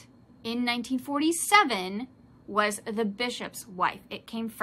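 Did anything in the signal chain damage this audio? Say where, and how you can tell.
No, nothing in the chain damaged this audio.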